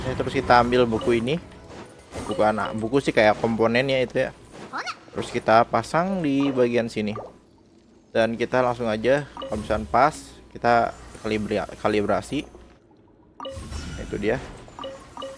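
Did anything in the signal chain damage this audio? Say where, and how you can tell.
No, no signal-chain damage heard.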